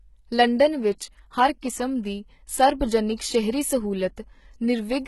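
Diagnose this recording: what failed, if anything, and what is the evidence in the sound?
The codec stage failed. Throughout the speech the treble is heavily damaged, with sibilants gritty and metallic and nothing above 11.8 kHz. This is likely HE-AAC compression at a bitrate that fits about 16 kbps. Spectral band replication copies lower bands upward, so the upper harmonics don't line up with the real ones.

Pre-echo, also from the codec, appears at 1.61 s just before "ਕਿਸਮ ਦੀ" as a brief hiss spread over 16 ms ahead of the attack. The transform block spreads its quantisation noise evenly, so noise sized for the loud onset fills the quiet gap before it and softens the attack.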